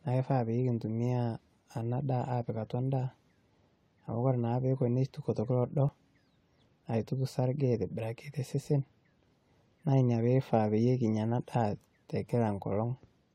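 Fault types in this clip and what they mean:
Overlap between stream segments: at 5.89 s the speech skips forward. Where two stream segments overlap in time, the player trims the shared stretch, discarding roughly 11 ms of sound that was never actually duplicated, so the waveform jumps. The position fits a boundary between segments about 6 s long. Unlike a dropout, no silence or gap is inserted; a sliver of audio simply goes missing.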